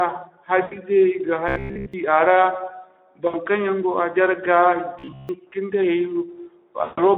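Throughout, the speech carries Speex codec damage: plainly audible hoarse, noisy texture from a CELP coder with few bits for the excitation, which fits a rate of around 11 kbps. The band is confined to roughly 300 Hz to 3.4 kHz, so nothing is heard above the telephone range.

From 0.61 to 0.79 s there is VoIP packet loss concealed by the speech codec. About 100 ms of audio is missing, which points to five 20 ms frames. The decoder keeps extrapolating its last pitch and filter with falling gain, so the sound smears into a fading buzzy tone or coloured noise and stays weak as the stream resumes. A shorter dropout of about 60 ms follows at 3.27 to 3.37 s, consistent with three frames, with the same brief smear and fade. The longest, about 140 ms and fitting seven frames, runs from 6.83 to 7.01 s.

Between 1.49 and 1.94 s, and again from 4.99 to 5.29 s, the sound turns into a rigid, metallic buzz at 66.7 Hz that only loosely tracks the underlying speech. 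This is robotic sound from repeated short buffers, likely caused by audio arriving too seldom so that the last 15 ms is looped. That period sets the fixed 66.7 Hz pitch, while most of the real audio in these spans is skipped.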